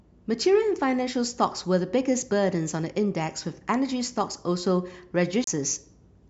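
Near the end of this speech clip, at 5.44 to 5.47 s, there's a CD skip. Playback drops out for a brief moment, around 30 ms, and then picks up from a different spot. That's the laser getting knocked or tripped by a flaw and landing on another turn of the disc's spiral, so the sound jumps by a whole number of rotations and continues from there.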